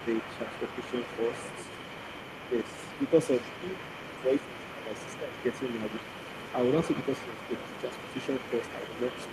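Other side's voice leaking through runs throughout, a faint second voice roughly 15 dB under the talker, likely from loudspeaker echo the canceller failed to remove. Speech suppressed in double talk occurs at 0.45 to 0.8 s, 2.47 to 2.66 s, 3.61 to 5.36 s and 7.28 to 7.51 s. The talker's voice dips by a few decibels to about 10 dB, likely because the canceller turned down both voices during overlap.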